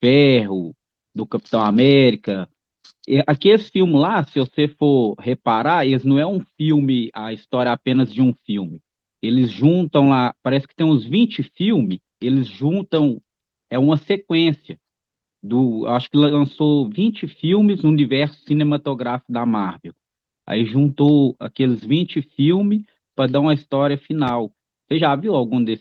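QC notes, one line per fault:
4.45 s, lost packet rebuilt from error correction: a single 20 ms frame of speech goes briefly rougher and grainier with no gap, because one packet was lost and the decoder played the low-bitrate copy carried by the following packet.
24.28–24.31 s, loud pop: one sharp pop sits on top of the speech, peaking a few dB above it while the speech continues underneath. It is likely a sudden voltage step or pulse, such as from a plug, switch or static, added to the signal.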